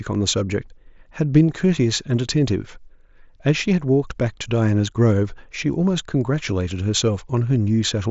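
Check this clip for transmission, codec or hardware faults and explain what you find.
Nothing's wrong here: the speech comes through the Bluetooth headset link at its usual wideband quality, with nothing in the transmission, coding or hardware that calls for attention.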